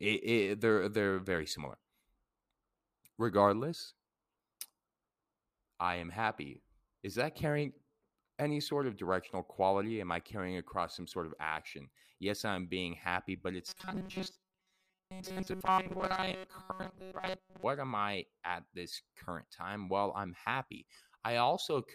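From 13.68 to 17.63 s the speech turns to a robotic buzz at 188 Hz, likely from a repeated 5 ms buffer replacing most of the audio; unlike stutter, speech contours persist.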